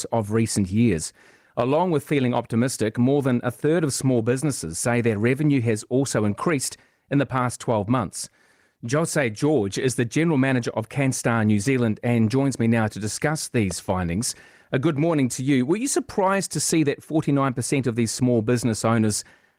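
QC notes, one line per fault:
No fault is audible anywhere in this speech recording. Nothing needs flagging for correction.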